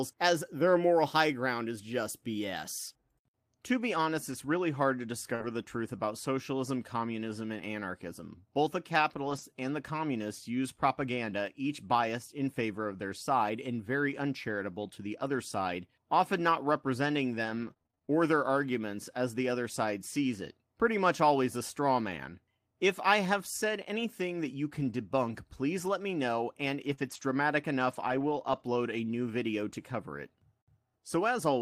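At 5.35 s, just after "really hard to", there is a short concealed packet loss of about 40 ms. The receiver filled it by extending the preceding sound, then crossfaded back into real audio, so the moment before "the truth about socialism" comes out as a brief smear. Overlapping it from 5.40 to 5.46 s, two lost packets were rebuilt from error correction, 40 ms of low-bitrate copies that play rougher and noisier.

A second stretch of packets rebuilt from error correction runs from 9.26 to 9.40 s. Here 80 ms of audio came from the redundant copies carried in following packets, so nothing drops out, but the reconstructed frames have a grainier, noisier texture than the surrounding speech.

Between 17.34 and 18.10 s, after "side often not representing" and before "their arguments as the", there is repeated packet loss with a robotic sound. Nine separate gaps, none longer than 25 ms, total about 180 ms, roughly a quarter of the span. 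Each hole is patched by continuing the last sound, and the next follows quickly, giving a choppy quality with fragments missing.

At 26.94 s, after "let me know and", another short concealed packet loss fills about 40 ms with extrapolated sound, heard as a quick wobble. It runs straight into error-correction recovery from 26.97 to 27.23 s covering 140 ms, then a longer rebuilt stretch from 27.91 to 28.61 s covering 360 ms. Across both, the speech sounds audibly coarser and noisier.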